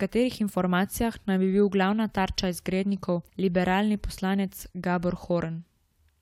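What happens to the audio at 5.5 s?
At 5.5 s the speech carries on intact, with no dropout, click, distortion or other fault at that moment.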